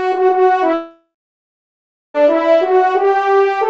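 From 0.74 s to 2.17 s the stream likely suffered a long network dropout: about 1.41 s of audio never arrived. The receiver stretched the last sound into a fading buzz, then about 1.03 s of near-silence followed before the sound resumed, band-limited to 8 kHz by the G.722 call codec.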